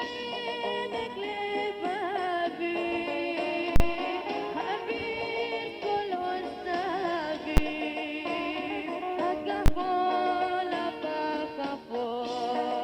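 Three bursts of invalid numbers at full scale hit at 3.76 to 3.80 s, 7.57 s and 9.66 to 9.68 s, where a calculation blew up and pinned the output at one extreme value. The 40 ms one pops in and out around a gap; the shorter two land as single bangs.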